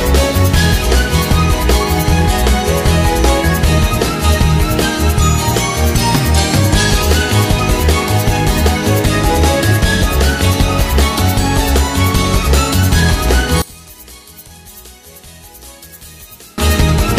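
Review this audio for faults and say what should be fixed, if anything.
From 13.62 to 16.58 s the sound drops by about 24 dB and turns faint. Centred material and low end nearly vanish. What remains is a faint residue of whatever differs between the two sides. The likely cause is one channel inverted: one stereo side has flipped polarity, so matching content cancels when the pair is summed to mono. Fix it by correcting that channel's polarity. To prevent it, check phase correlation and a mono fold-down before export.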